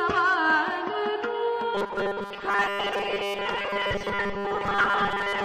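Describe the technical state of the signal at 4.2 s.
At 4.2 s you're inside robotic sound from repeated short buffers, running from 1.75 s to the end. It's a rigid 200 Hz buzz, likely from 5 ms chunks repeated over most of the audio.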